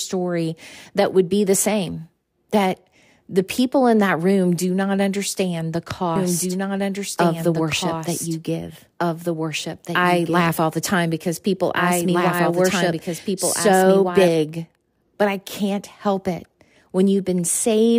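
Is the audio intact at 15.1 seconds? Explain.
Yes, the speech at 15.1 seconds plays through cleanly with no audible dropout, click, distortion or other fault at that moment.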